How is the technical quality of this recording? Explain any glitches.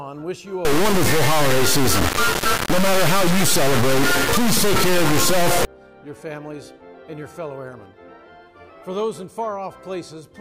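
The recording has one serious glitch, integer read as float, running from 0.65 to 5.65 s. For those five seconds, samples stored as 32-bit integers are decoded as 32-bit floats. Most bit patterns then become either tiny near-zero values or huge ones far past full scale, so the output snaps between silence and the clipping rails. It sounds like a brutally loud, buzzing square wave that drops out to silence wherever the underlying audio is very quiet. Ordinary clipping keeps the original sound recognisable under the distortion. Here the original is replaced outright by a harsh on-off buzz.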